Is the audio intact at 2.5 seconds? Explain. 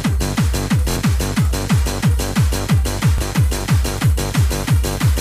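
Yes, at 2.5 seconds the audio plays through cleanly, with no dropout, click, distortion or other break in the signal.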